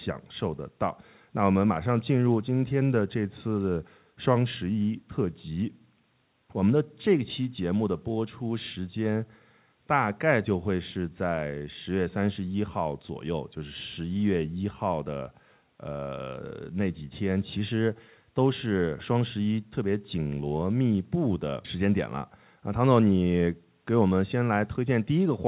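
Nothing stood out on listening to this speech recording, which has the narrowband sound of a call path using G.711 mu-law at 64 kbps, with nothing above 4 kHz.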